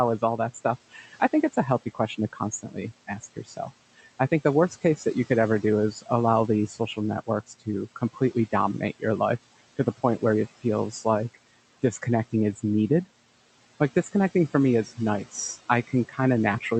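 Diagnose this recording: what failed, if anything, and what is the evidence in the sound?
The background noise pumps: between phrases it sinks away, then swells back whenever speech returns. These are noise suppressor artifacts from the call-processing stage. The room noise sits about 18 dB below the speech, and the suppressor pulls it down by about 16 dB in gaps. Because it makes that decision band by band, frame by frame, the leftover noise rises and falls rather than staying steady.

Speech cut by the noise suppressor also shows up, as stretches where quiet consonants and word endings sound swallowed. It occurs from 0.19 to 6.08 s (dips up to about 14 dB, roughly a second of sound in total), 6.68 to 9.03 s and 9.78 to 13.07 s (up to about 16 dB), 14.85 to 15.34 s just after "like disconnecting for me" (about 10 dB, very brief), and from 15.87 s to the end (about 12 dB). The suppressor mistook low-level speech energy for noise and attenuated it along with the background. 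The Opus call path itself, at 48 kbps with audio extending up to 8 kHz, is working normally.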